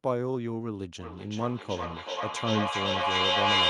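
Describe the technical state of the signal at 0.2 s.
At 0.2 s the speech signal is intact, with no audible technical fault at that moment.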